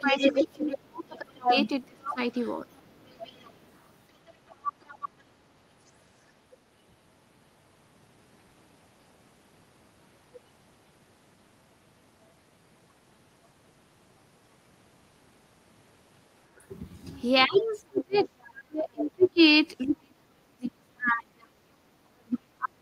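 From 0.0 to 5.9 s, the other side's voice leaks through, likely because the echo canceller left loudspeaker echo in the microphone signal. It sits only about 5 dB below the talker. Overlapping this, from 0.01 to 4.4 s, speech is suppressed in double talk, likely because the canceller turned both voices down. The talker dips by roughly 25 dB, about two seconds in all. Fainter leakage returns from 16.59 to 19.3 s and from 20.66 to 21.12 s. From 17.47 s to the end, suppression cuts the voice by up to about 40 dB.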